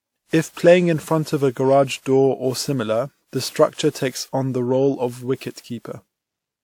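From start to finish the speech carries generation loss: a swirly, hollow smear with softened consonant attacks, likely from about ten successive lossy passes, with a character that points to WMA 1 near 128 kbit/s. Each re-encode quantises on a shifted frame grid, so noise and spectral gaps pile up. Unlike a single low-bitrate encode, the bandwidth still reaches about 20.1 kHz, yet the texture is more degraded than that bandwidth suggests.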